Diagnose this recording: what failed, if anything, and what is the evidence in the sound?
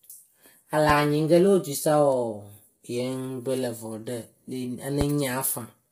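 Codec stage: the speech was likely passed through low-delay AAC compression (AAC-ELD) at a bitrate the sound suggests is around 24 kbps. Its short frames resolve the voice's harmonics poorly, so the whole clip sounds heavily rough and grainy, with noise between harmonics and a synthetic-sounding top band.

Analogue wiring or driver stage: two loud pops, at 0.90–0.93 s and 5.01–5.04 s, each a single sharp hit some 15 dB above the speech, which carries on underneath. A sudden voltage step or pulse, likely from a plug, switch or driver glitch, was added to the signal.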